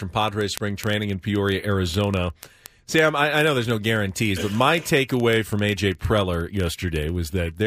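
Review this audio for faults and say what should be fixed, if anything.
Word clock ticks run through the speech from 0.12 to 7.64 s, a sharp tick about every 30 ms, some two hundred in all. The receiving device runs on its own clock, roughly 700 parts per million off the sender's. Each time the two clocks slip past each other, a single sample is dropped or repeated. That fixed, rapid rhythm sets these ticks apart from scattered digital clicks or dropouts. Locking the receiver to the sender's word clock, or placing a sample-rate converter at its input, would prevent them.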